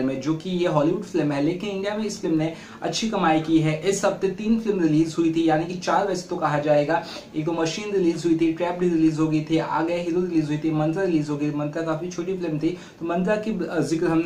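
Nothing in this recording trips up the ear: there are no dropouts, glitches or other faults to point to anywhere along the way.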